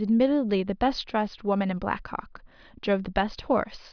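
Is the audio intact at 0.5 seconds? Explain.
Yes, at 0.5 seconds the speech is intact, with no dropout, distortion or other technical fault audible at that point.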